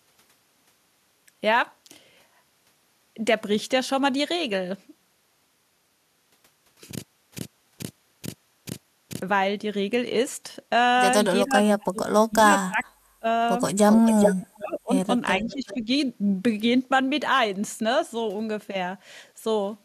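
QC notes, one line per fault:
7.04–9.21 s, stutter with silent gaps: a 120 ms fragment repeats five times, each followed by 316 ms of digital silence, a 436 ms cycle. This likely comes from a stalled stream replaying its last buffer on each retry, so the intervening audio is lost.
11.46–13.26 s, speech suppressed in double talk: the speech drops in pieces, at worst by about 30 dB, for roughly a second in total, likely because the echo canceller attenuated both its own talker and the loudspeaker echo during simultaneous talk.
12.80–12.84 s, echo leak: a brief copy of the speech returns 431 ms late, about 35 dB down, likely residual loudspeaker echo that the far-end canceller failed to remove.
13.90–14.47 s, echo leak: a 383 ms delayed copy arrives only about 5 dB below the speech, likely uncancelled loudspeaker pickup.
14.53–14.93 s, speech suppressed in double talk: the level dips by up to about 20 dB across roughly 0.4 s, likely gating by the canceller during overlap.
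15.31–15.74 s, echo leak: the same 383 ms delay recurs, about 20 dB down, likely the same residual echo path.
15.44–15.89 s, speech suppressed in double talk: a shallower dip of about 10 dB over roughly 0.4 s, likely the canceller ducking during overlap.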